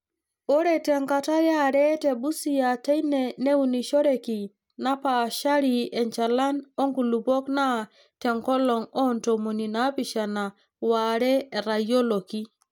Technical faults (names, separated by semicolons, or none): none